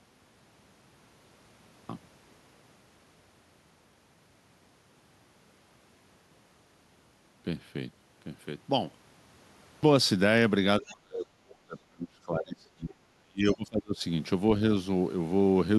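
At 1.75 s, after a silent opening, and again at 9.67 s after a 0.78 s pause, a clipped start after a pause cuts about 140 ms and 160 ms. The playback device is still waking, so the waveform jumps straight in with no onset.

From 10.8 to 14.0 s, speech is suppressed in double talk, likely from an echo canceller ducking both talkers. About 3 s of the signal shows dips of up to roughly 35 dB, visible as thinned, patchy spectrogram bands.

At 10.84 to 10.92 s and 13.46 to 13.55 s, the other side's voice leaks through as faint, roughly 25 dB down scraps, seen as brief low-level smudges.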